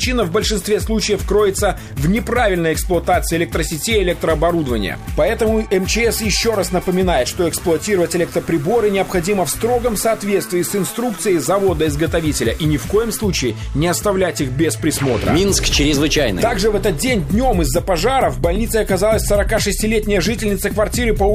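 No technical faults can be heard anywhere in this recording.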